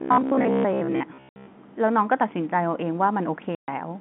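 From 0.02 to 1.48 s the speech has a rigid, metallic buzz at about 66.7 Hz that only loosely follows the talker. This robotic sound from repeated short buffers likely comes from audio arriving too seldom, so most of the time is filled by looping the last 15 ms while the real signal is skipped.

Near the end of that stretch, from 1.29 to 1.36 s, the sound drops out for 70 ms with hard edges. A second, longer hole of 130 ms follows from 3.55 to 3.68 s. Both gaps are packet loss filled with silence, where missing packets were replaced by nothing. Their lengths fit 10 ms packets. The narrow 150 Hz to 3.6 kHz telephone band of the G.711 line carries through both.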